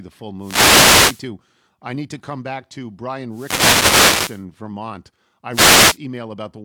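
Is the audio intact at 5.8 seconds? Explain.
No. At 5.8 seconds the speech sits inside a wireless microphone noise hit lasting from 5.51 to 5.98 s: the FM radio link fades as reflections cancel, so receiver hiss swells into a brief static swish. Unlike a digital dropout, the gap fills with noise, not silence.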